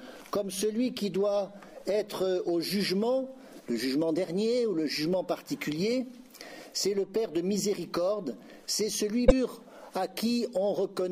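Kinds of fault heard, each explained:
Damaged data in a compressed stream: Some of the encoded data is corrupt. The decoder misreads those frames, loses sync and hunts for the next valid frame header. This is heard as a brief glitch from 9.24 to 9.32 s.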